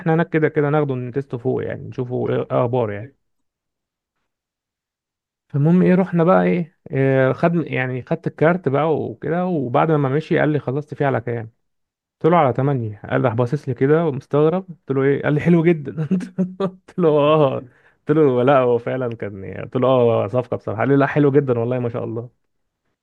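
A speech recording with one corrupt frame decoded, from 2.27 to 2.29 s: a brief chirp-like blip peaking near -15 dBFS. Flipped bits in the compressed stream made the decoder apply wrong gains or codes, misplacing spectral energy for roughly two frames' duration.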